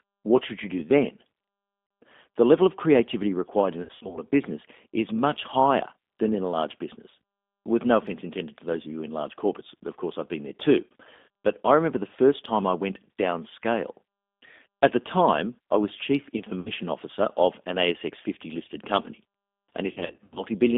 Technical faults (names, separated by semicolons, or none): G.729 codec; VoIP packet loss concealed by the speech codec